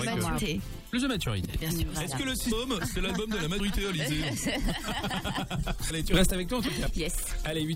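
At 0.37 s the audio skips ahead by roughly 150 ms, and at 5.9 s it skips by a larger amount, around 400 ms. These are compressed frames skipped. Whole blocks of encoded audio never reach the output, about seven frames in the first gap and about fifteen in the second, which fits a codec using 24 ms frames. On a spectrogram, the patterns on either side of each join don't line up.

From 1.45 s to 1.54 s the level drops by about 9 dB, and from 6.14 s to 6.31 s it rises by about 10 dB. Each is a sudden gain jump, likely from a digital gain change applied in one step without a ramp. The sound and its background noise shift together, so the whole signal lurches quieter and then louder. A waveform view shows the envelope stepping abruptly at those points. On a spectrogram, every frequency band brightens or darkens at the same moment.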